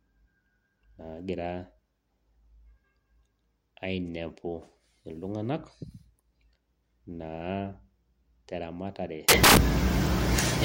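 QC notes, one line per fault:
9.29–10.64 s: samples built from the wrong bytes. The last stretch of the speech collapses into loud, harsh broadband noise that runs to the end of the clip. The reader has assembled each sample from its bytes incorrectly. It may be off by one byte or have the byte order swapped. The rapidly changing low bits end up as the most significant part of every value. The result is broadband hiss at high level.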